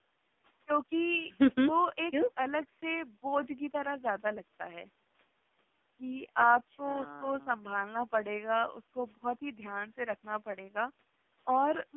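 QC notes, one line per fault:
Throughout: AMR narrowband mobile codec. Everything sits between 200 Hz and 3.6 kHz with nothing above, and the speech has a heavy buzzy, synthetic edge. That's the narrowband vocal-tract model running starved of bits, which fits a low rate around 5.9 kbps.
10.52 to 10.56 s: lost AMR speech frames. There's a quick dip or warble in the speech, which points to a single 20 ms frame failing. The decoder papered over it by repeating the previous pitch and vocal-tract settings at lower gain.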